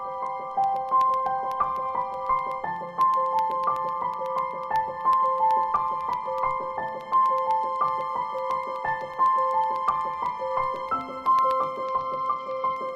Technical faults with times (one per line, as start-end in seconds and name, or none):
0.14-12.89 periodic USB or driver dropouts
11.85-12.76 Bluetooth SBC bit pool drop